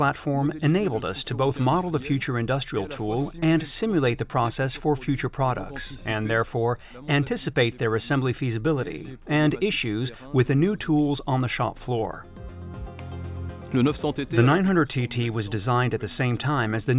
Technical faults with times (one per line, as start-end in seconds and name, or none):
none